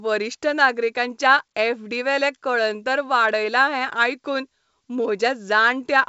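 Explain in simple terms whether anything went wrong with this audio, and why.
Nothing stood out on listening: the speech comes through a normal call connection, and the missing top end, with nothing above about 8 kHz, is simply how that kind of call line carries sound rather than something going wrong.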